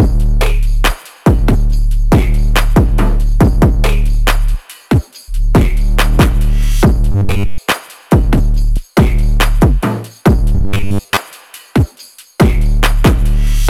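Audio likely arrived too seldom, twice: from 7.12 to 7.59 s and again from 10.55 to 11.17 s, the playback appears to loop its last short buffer over and over, skipping the real audio underneath. Most of each stretch is made of these repeats, which produces robotic sound from repeated short buffers: a rigid, metallic 100 Hz buzz imposed on the sound, which fits a buffer of about 10 ms.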